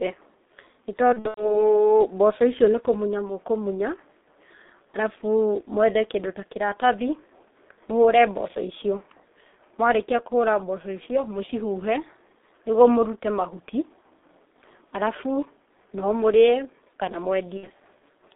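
Throughout the recording the speech has the muffled, hoarse quality of the G.723.1 codec, heavily damaged in a way that fits its 6.3 kbit/s mode. The line band runs only from 250 Hz to 3.7 kHz, and the coarse, slowly updated voice model smears consonants and roughens voicing. On a spectrogram, energy stops sharply above 3.7 kHz and below 250 Hz, and harmonics appear blocky in 30 ms steps.

From 1.13 to 1.67 s, VoIP packet loss concealed by the speech codec produces about 180 ms of missing audio scattered over roughly 240 ms, with the longest gap 90 ms, which fits six lost 30 ms frames. The decoder keeps replaying its last pitch and filter at falling gain, so the sound stretches into a buzzy tone or coloured noise that fades. A spectrogram shows flat, frozen spectral bands, and the waveform shows a decaying envelope.

At 17.58 to 17.69 s, a shorter concealed loss of about 60 ms, which fits two frames, again stretches the sound briefly into a frozen buzz or noise that fades in level. 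The voice recovers weakly in the frames that follow, because each decoded frame builds on the concealed one before it. On a spectrogram this appears as a short stretch of frozen spectrum, and on the waveform as a brief dip in amplitude.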